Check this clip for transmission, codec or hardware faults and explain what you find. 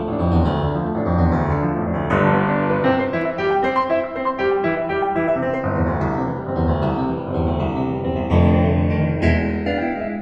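One fault runs through the whole music clip: the channels drifting apart. The left and right signals appear to come from devices on independent clocks, mismatched by something like 70 ppm, so the offset between them grows steadily to roughly half a millisecond by the end. In mono the two copies interfere, and the comb notches glide slowly across the spectrum, heard as slow flanging. A spectrogram shows dark notch lines sweeping gradually.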